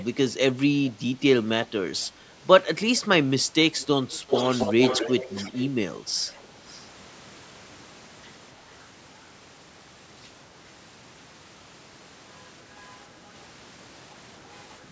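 Faint echo leak shows up as short delayed ghosts of the speech at 0.0–0.05, 0.85–0.92, 2.97–3.01 and 3.78–3.86 s, then a long, loud stretch from 4.11 to 5.68 s, only about 5 dB under the direct voice. Smaller scraps follow at 5.95–5.99, 6.28–6.48 and 6.69–6.84 s. Each trails the talker by 278 ms, which likely means a far-end loudspeaker copy that the echo canceller didn't fully remove. The call's band stops at 8 kHz.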